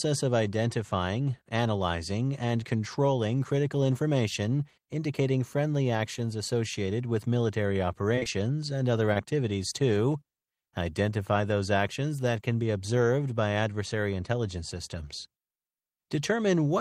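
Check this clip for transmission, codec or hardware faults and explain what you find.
Short concealed packet loss occurs four times. Right after "actions associated with military", three consecutive 20 ms packets failed to arrive, at 8.15, 8.19 and 8.23 s, spanning 8.15 to 8.27 s, followed by one more at 9.13 s, just after "and other". The decoder bridged each gap by extending the preceding sound, so each gap is heard as a brief smear or wobble.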